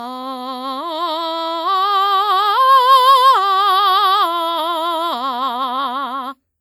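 Throughout the music, generation loss gives a swirly, smeared, hollow texture with blurred attacks, likely from around five lossy re-encodes, consistent with WMA at 96 kbit/s.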